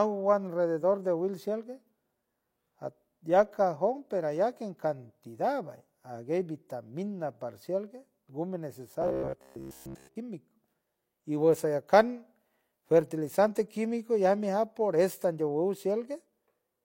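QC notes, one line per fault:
9.02–10.16 s, robotic sound from repeated short buffers: Just after "hay vitamina parcial perfueme", the speech turns into a rigid, metallic buzz. The buzz sits at a fixed pitch of 66.7 Hz. It roughly follows the words, but most of the real audio in this stretch is missing. The likely cause is new audio arriving too slowly. The last fragment, about 15 ms long, is looped to fill the gap. That loop rate sets the buzz pitch.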